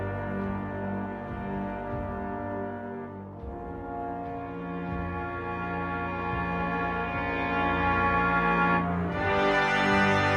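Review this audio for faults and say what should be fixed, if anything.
Nothing here needs fixing; no faults were found.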